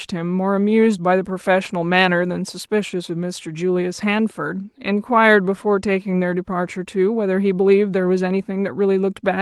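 No technical faults are audible.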